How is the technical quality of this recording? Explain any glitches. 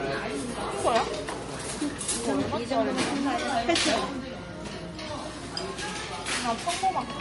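The quality is limited by one fault that runs through the whole clip. From start to finish, nothing is present above 11.2 kHz, and smeared, swirly artefacts of two slightly different textures overlap. This is likely transcoding between lossy codecs, consistent with low-bitrate MP3 followed by AAC. On a spectrogram, a hard ceiling at 11.2 kHz sits over patchy, blocky time-frequency holes.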